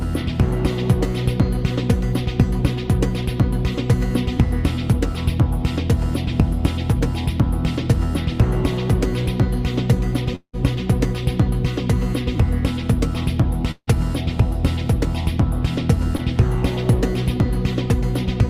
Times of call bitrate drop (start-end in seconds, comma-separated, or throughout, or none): none